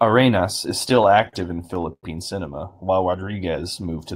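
It's a speech clip, and from 0.89 to 2.05 s, right before "cinema while", you get repeated stalls (stutter). The jitter buffer kept running dry, so the receiver stretched the last sound to cover 13 little gaps, about 256 ms in all, the longest about 103 ms. Nothing's lost, but roughly a fifth of that stretch is filler, so it drags and stutters. Then after "cinema while", from 3.19 to 3.53 s, there's a jitter buffer slow-down. The receiver repeated pitch periods to rebuild its reserve, adding about 53 ms and running that bit at about 87% speed with the pitch unchanged, so it sounds drawn out.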